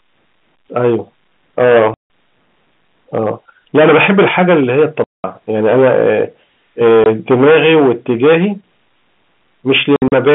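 A harsh fuzz rides every loud syllable from start to end. This is hard clipping: the speech is overdriven by about 14 dB, so around a tenth of the waveform is sliced flat. At 1.94–2.03 s and 5.04–5.24 s, the speech drops into abrupt silent holes, and a brief gap follows at 7.04–7.06 s. Between 9.96 and 10.12 s, several short dropouts are scattered, the longest about 60 ms. These are packet loss filled with silence: missing packets were replaced with nothing, and the gap lengths fit 20 ms packets. The narrow telephone band, from about 150 Hz to 3.5 kHz, comes from the G.711 line itself.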